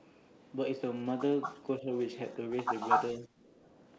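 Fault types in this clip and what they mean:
Echo leak: A delayed copy of the speech trails it by 232 ms. It appears at 1.06–1.11, 1.42–1.6, 1.98–2.06, 2.26–2.34 and 2.75–3.26 s. The three short scraps sit far down, about 35 dB below the speech. The stretch at 1.42 s is only about 5 dB under it. The last one lasts half a second and is about 5 dB louder than the speech itself. The likely cause is a loudspeaker on the far side whose echo canceller let part of its microphone pickup travel back.
Speech suppressed in double talk: The speech dips twice while the far side's sound is also playing. At 1.79–1.87 s it drops by about 5 dB for about 70 ms, a slight sag. At 3.19–3.34 s it overlaps the loud echo and falls by about 15 dB for about 150 ms. This is likely an echo canceller that could not tell the talker from the returning echo and turned both down together.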